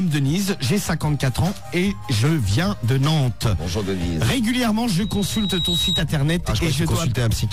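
A microphone picked up its own loudspeaker, and loop gain rose above one at 3.8 kHz, causing loudspeaker feedback squeal from 4.98 to 6.04 s. A single tone swells over most of a second to about the level of the surrounding sound, then stops.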